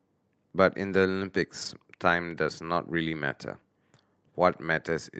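At 1.61 to 1.71 s, a lost packet rebuilt from error correction: about 60 ms of the Opus call stream, which suggests three lost packets, was replaced by the low-bitrate copies carried in following packets. The speech continues without a gap, only briefly rougher and noisier, unlike concealment, which smears or fades.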